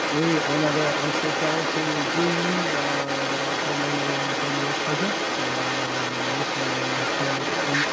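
Across 0 to 7.9 s, a second voice sounds about as loud as the speech: the other side's voice leaking through, likely loudspeaker echo the canceller missed.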